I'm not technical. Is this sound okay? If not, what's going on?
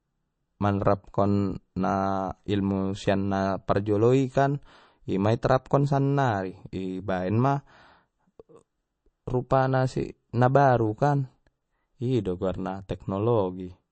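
No. All the way through, the speech sounds watery and swirly, as if heard through a thin layer of water, with a dull top end and a metallic chirp on the s sounds. The likely cause is heavy MP3 compression: to save space, the file keeps only the parts of the sound it judges most important, cutting off the treble and dropping quieter details that flicker in and out from moment to moment.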